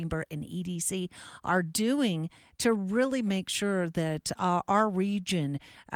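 Listening through the speech, nothing stood out as a technical fault, and the Opus voice compression it passes through leaves only light traces.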